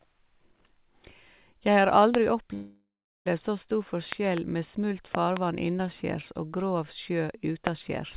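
A sharp loud pop lands at 2.15 s, sitting roughly 20 dB above the speech, which carries on underneath. It's likely a voltage spike from a switch, plug or static hitting the line and getting shaped into a click.

Then at 2.54 s there's a call audio freeze lasting 0.72 s. The last bit of speech smears into a fading buzz that drops to silence for about 0.38 s, most likely because packets stalled and the jitter buffer ran dry. Speech picks up exactly where it stopped at 3.28 s, so nothing's lost, just delayed.

More pops follow, each a double: 4.12 to 4.39 s at about 15 dB, and 5.15 to 5.39 s at about 20 dB. A final single pop at 7.67 s comes in at roughly 20 dB. All of this rides on narrowband call audio with nothing above 4 kHz, as you'd expect from G.711.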